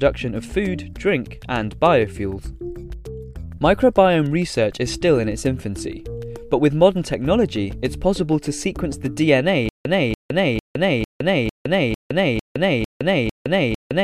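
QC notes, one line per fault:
9.69–14.03 s, stutter with silent gaps: the same 288 ms fragment repeats nine times, each followed by 163 ms of digital silence, an even 451 ms cycle to the end, likely from a stalled stream retrying. Unlike random dropouts, the burst is identical each time and no new audio arrives.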